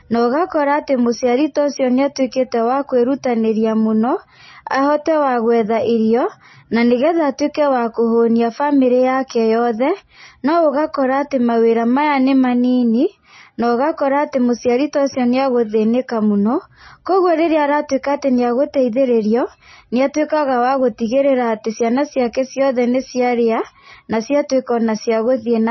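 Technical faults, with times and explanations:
Throughout, MP3 compression: the speech has nothing above about 5.9 kHz and a watery, swirling quality, likely from a low bitrate near 25 kbps. Unlike a plain low-pass filter, weak frequency lines drop in and out frame to frame, so s sounds chirp metallically and onsets smear.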